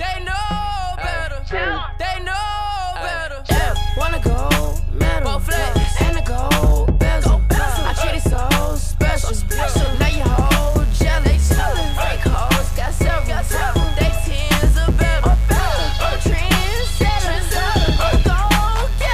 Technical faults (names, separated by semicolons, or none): mains buzz